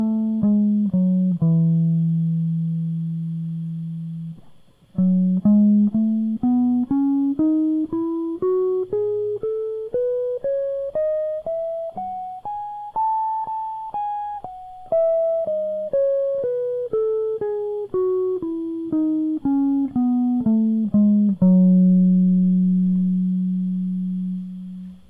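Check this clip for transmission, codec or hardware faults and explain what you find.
Nothing faulty can be heard anywhere in this music.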